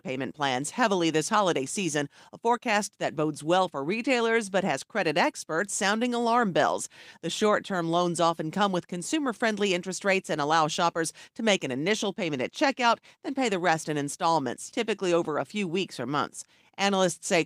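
No technical faults are audible anywhere in this speech recording.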